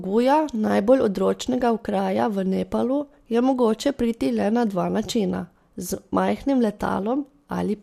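No technical faults can be heard anywhere in the speech.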